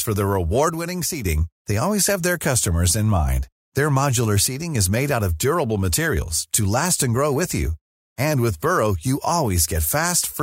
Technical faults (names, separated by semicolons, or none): one channel drops out